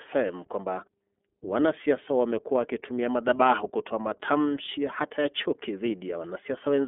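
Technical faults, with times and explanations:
Throughout, iLBC codec: speech sits in a telephone band of 250 Hz to 3.5 kHz, with nothing above 3.7 kHz, and has a plainly rough, synthetic grain. That grain comes from coding each 30 ms frame on its own, which fits the 13.33 kbps mode and sets it apart from plain band-limiting.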